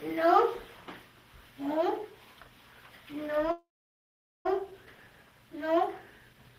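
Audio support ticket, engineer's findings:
Call audio freeze, 3.51 to 4.47 s: last sound smeared into a fading buzz or hiss, then about 0.8 s of silence. Audio resumes where it stopped, nothing lost, 0.94 s added delay. Likely cause: network hold-up draining the jitter buffer.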